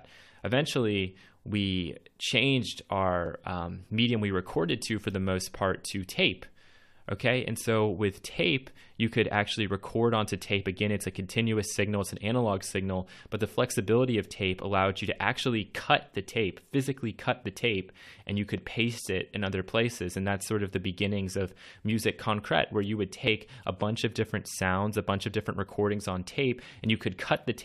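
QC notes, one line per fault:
3.26 s and 23.27 s, overlap between stream segments: two tiny skips where two chunks of the stream claimed the same stretch of time. The player threw out the doubled part, but that sound wasn't really doubled, so about 16 to 18 milliseconds go missing and the waveform jumps.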